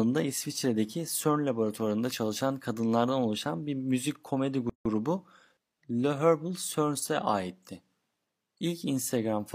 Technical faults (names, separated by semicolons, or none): gap at a join of encoded pieces